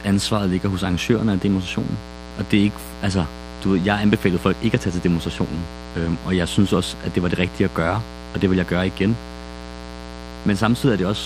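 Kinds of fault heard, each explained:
Mains buzz: sharp switching spikes from 60 Hz mains leak into the speech path twice per cycle, giving a steady raspy buzz throughout, about 15 dB below the speech. On a spectrogram it shows as evenly spaced horizontal lines at 60 Hz harmonics, climbing well into the kilohertz range.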